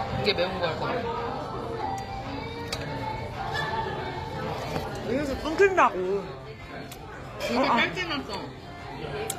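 Throughout, the treble sounds gritty and metallic, with nothing above 14.9 kHz, pointing to a low bitrate near 24 kbps. This is likely HE-AAC compression, whose copied-up treble, unlike plain band-limiting, stays bright but mismatched.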